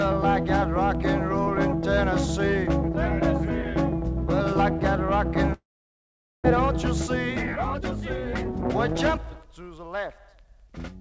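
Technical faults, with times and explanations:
5.53 to 6.46 s, long network dropout: audio likely stopped arriving, so the receiver stretched the last sound into a fading buzz, then silence, and half a second never returns.
6.70 to 10.68 s, jitter buffer speed-up: the overfilled buffer trimmed short pitch-period pieces repeatedly, about 300 ms in all, so the audio runs 7% faster at unchanged pitch.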